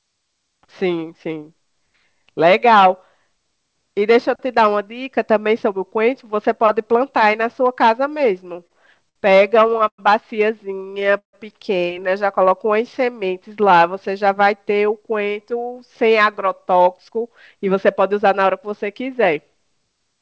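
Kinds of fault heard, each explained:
Repeated stalls (stutter): late packets emptied the jitter buffer eleven times between 8.50 and 10.00 s, with gaps up to 108 ms filled with continued sound. The waveform shows stretched, repeating segments and the spectrogram shows smeared bands.
Call audio freeze: at 11.18 s the sound halts for about 150 ms, mostly silent, then resumes where it stopped, likely from packets held up in transit. The waveform shows a brief flat gap.
Jitter buffer slow-down: from 12.42 to 13.18 s, repeated pitch periods add 66 ms, so the speech runs at 92% speed with unchanged pitch. The spectrogram shows harmonics stretched in time.
Jitter buffer speed-up: from 15.02 to 18.53 s, small pieces totalling roughly 300 ms are cut, so the speech runs at 107% speed with unchanged pitch. The spectrogram shows the syllables packed closer together.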